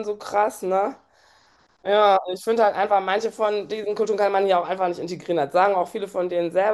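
Listening to this speech recording, nothing technically wrong stood out at any point.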